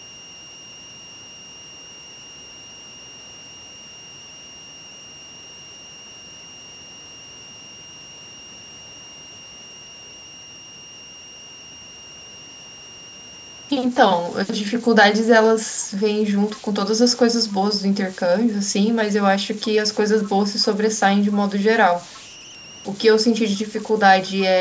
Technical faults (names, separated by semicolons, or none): converter idle tones; echo leak